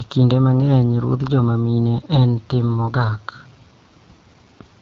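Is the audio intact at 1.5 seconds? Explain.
No. At 1.5 seconds, as across the whole clip, the speech has passed through the AMR wideband (HD Voice) codec at a very low rate, consistent with about 8.85 kbit/s. The pulse-driven vocal tract model is starved of bits, so the speech sounds plainly rough and raspy.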